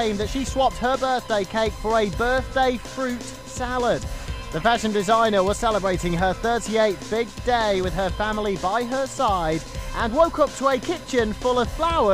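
USB whine runs throughout: a steady 1 kHz tone, roughly 25 dB below the signal, from 1 ms USB frame current leaking in through power or ground.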